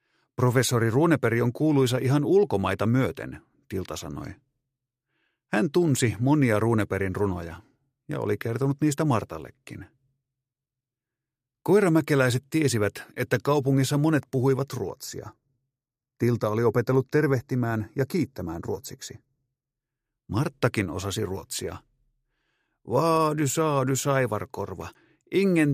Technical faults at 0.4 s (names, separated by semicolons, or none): none